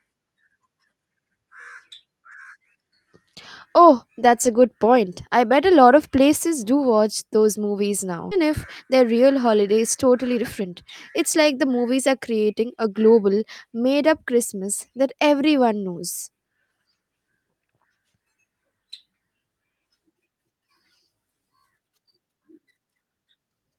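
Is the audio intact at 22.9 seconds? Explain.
Yes, at 22.9 seconds the speech plays through intact, with no dropout, click, distortion or other fault at that moment.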